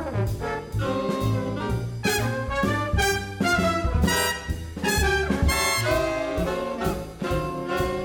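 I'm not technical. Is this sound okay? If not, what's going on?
Yes, this one's fine; nothing in it sounds broken or off, so there's no problem to chase down here.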